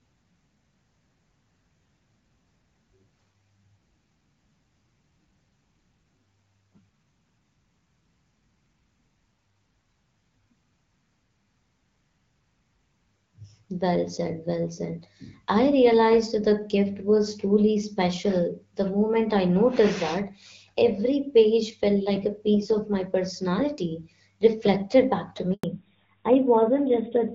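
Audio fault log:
25.54–25.64 s handover gap: just after "personality reflected back to", the call switches networks and a 100 ms silence follows, with no speech frames arriving.
25.64–27.35 s fallback to narrowband: the call then drops from AMR-WB at 12.65 kbit/s to AMR-NB at 12.2 kbit/s, so everything above 4 kHz disappears and speech sounds duller and rougher.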